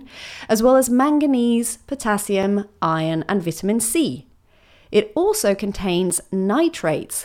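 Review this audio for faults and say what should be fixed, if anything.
Block of digital silence at 2.43 s, just before "iron and vitamin", and again at 6.10 s: each time the speech drops to silence for about 5.8 ms, which fits an unfilled 256-sample output buffer, and the abrupt cut and return produce a brief tick. To prevent it, give the audio thread enough buffer headroom and priority so every block is written before its deadline.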